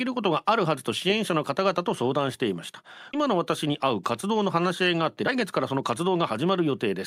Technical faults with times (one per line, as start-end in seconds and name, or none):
3.13-3.15 skip ahead
4.95-6.87 jitter buffer speed-up